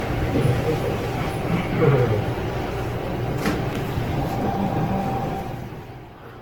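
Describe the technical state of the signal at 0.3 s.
At 0.3 s the sound carries generation loss throughout, likely from several successive AAC encodes, which pile up fresh quantisation noise, leaving swirly, hollow, smeared textures, blurred attacks and nothing above 18.6 kHz.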